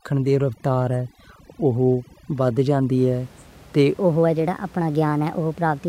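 From 0 to 2.98 s, overdone noise removal leaves the speech over a near-silent floor with twinkling specks. A spectrogram shows patchy, gated bands and scattered isolated dots. After that, the room noise, about 26 dB below the speech, returns as an even haze. From 3.98 s to the end, a section at the wrong speed plays 1.24 times fast, about four semitones high and hurried, likely from resampling to a mismatched clock. Harmonics shift upward and waveform features compress in time.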